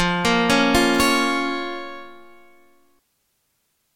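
A short, irregular burst of crackle and scratching cuts across the sound from about 0.94 to 1.05 s, roughly a tenth of a second of chopped, spitting noise. This is loose connector crackle: a worn or dirty contact making and breaking rapidly, interrupting the signal.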